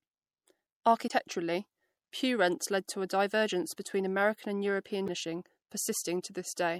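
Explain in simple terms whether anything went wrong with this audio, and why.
Two problems can be heard. Throughout the speech there is a watery, swirly quality, and the s sounds have a metallic edge. That is the sound of MP3 compression, likely squeezed too hard. To save space, the encoder drops the quietest parts of the sound and cuts off the highest treble, and those dropped parts flicker in and out. Unlike ordinary muffling or background noise, the damage shifts and warbles with the speech itself.

The second problem is damaged data in a compressed stream, heard as two brief chirps or blips, from 1.07 to 1.11 s and from 5.05 to 5.09 s. At those points part of the compressed file was corrupted, so the player misread it, lost its place and had to find the next readable section. That can leave a skip forward. These are sudden, isolated glitches, not the steady wateriness of the compression.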